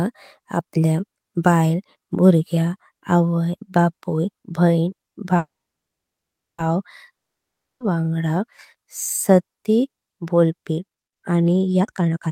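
At 5.37 s there's a call audio freeze: the sound stops and sits silent for about 1.12 s until 6.60 s, then picks up exactly where it left off. Nothing's missing, but everything after arrives 1.21 s later, likely because packets stalled and the jitter buffer ran dry.

From 7.12 to 7.82 s comes a long network dropout. It's 0.68 s of pure silence, and this time the sound resumes further along, so that whole 0.68 s stretch is simply gone, most likely because the packets carrying it never arrived.

Right at the end, 11.80 to 12.31 s, you get a jitter buffer speed-up. The receiver trims many tiny pitch-period slices, roughly 0.4 s in total, to shed its excess backlog. The speech rushes along at 173% speed with the pitch unchanged, so it sounds hurried.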